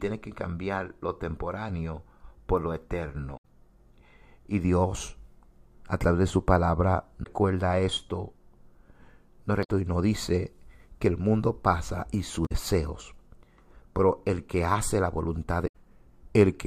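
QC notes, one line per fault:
3.33–3.44, 7.20–7.27, 9.60–9.69, 12.42–12.52 and 15.64–15.75 s, damaged data in a compressed stream: five brief chirps or squawks in the speech, each under about 0.12 s, after "lo temporáneo por lo", before "y nos dice que" and after "el mundo pasa y". The compressed data is corrupt at these points, so the decoder misreads those frames, loses sync and skips to the next valid frame header, leaving a burst of garbage.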